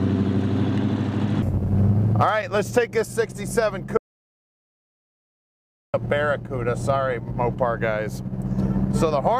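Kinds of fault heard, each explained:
Audio dropout to silence: from 3.97 to 5.94 s the sound stops dead mid-flow and about 1.96 s is replaced by silence, with no room tone underneath. The likely cause is a lost input link or brief mute. The waveform shows a flat line, and the spectrogram shows a fully black gap.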